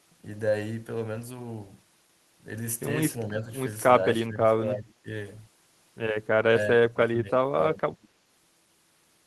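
At 4.26–5.07 s and 6.66–8.14 s, speech sinks by about 15 then 20 dB, likely speech suppressed in double talk, showing as waveform notches and spectrogram gaps.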